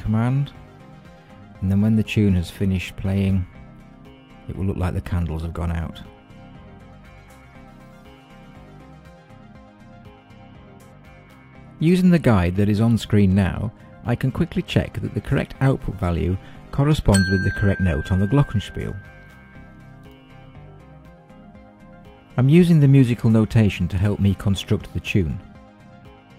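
From 16.28 to 18.28 s, an adaptive stream at a lower bitrate: quality drops abruptly without a gap, treble turns synthetic with nothing above 14.9 kHz, consistent with a low-bitrate HE-AAC fallback.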